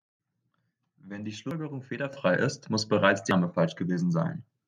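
At 2.13 s the microphone volume steps up, about 9 dB louder all at once. What's going on is the call software deciding the mic input was too quiet and bumping the device's input volume in a single jump rather than easing it up. You hear the voice and the background noise leap up together, so the room tone gets louder right along with the speaker.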